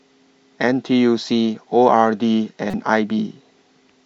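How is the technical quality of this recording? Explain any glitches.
The recording has one audible glitch, a short corrupt frame decoded in the speech from 2.65 to 2.74 s. For about 90 ms, spanning what sounds like roughly three consecutive compressed frames, damaged data was decoded as if valid, so misread gains and codes scattered energy into the wrong frequency bands. It comes through as a brief chirpy, noisy blip peaking at around -15 dBFS. On a spectrogram it shows as a small block of misplaced, smeared energy with hard frame-edged boundaries. The waveform shows a short jagged burst.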